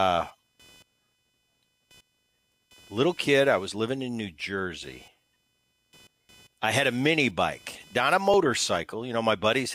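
A faint buzz runs under the speech for the whole clip, pulsing at around 500 Hz and sitting roughly 35 dB below the speech. It comes and goes with the computer's own workload rather than with anything in the sound itself. This is computer activity noise: shifting load on the processor, graphics card or mouse disturbs the ground shared with the audio circuit, and that fluctuation leaks into the signal.

At 8.34 s, just after "mini bike not a", the sound jumps ahead very slightly, losing only a millisecond or two with no gap of silence. This is most likely a dropped buffer (overrun). The recording software failed to read its samples in time, so the hardware overwrote that short stretch and the audio on either side was butted together.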